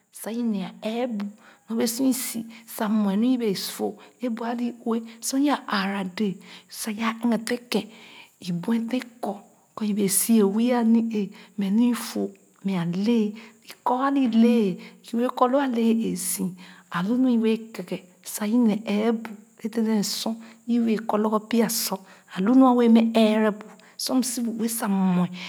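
A speech recording with automatic gain rising from 0.23 s to 9.03 s. The gain control judged the input too quiet and raised its gain slowly. Voice and background noise swell together over those nine seconds. The total rise is about 8 dB.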